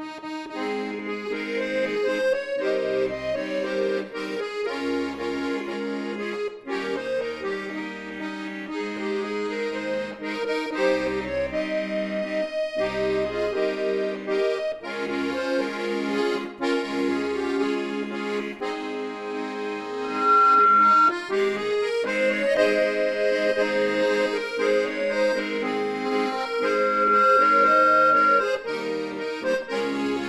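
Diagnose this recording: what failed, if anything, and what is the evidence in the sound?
Loudspeaker feedback squeal at 20.03–21.16 s and again at 26.05–28.61 s, in the analogue acoustic path: a 1.4 kHz tone swells over roughly a third of a second, then about a second, to around 10 dB above the programme, because the microphone is re-amplifying its own loudspeaker with loop gain above one at that frequency.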